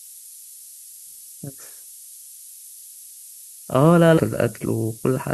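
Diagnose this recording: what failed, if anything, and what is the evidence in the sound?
Sample-format conversion: low bit depth with noise shaping, at 6 bits, leaves a loud, steady hiss throughout. The spectrogram shows noise climbing steeply toward the top of the band.

Network or playback: the sound jumps ahead with a small blip from 4.17 to 4.23 s, likely a stream segment skipped. The waveform shows an abrupt discontinuity there.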